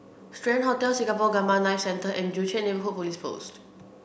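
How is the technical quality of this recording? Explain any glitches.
The technical quality of this recording is good, with no glitches to explain.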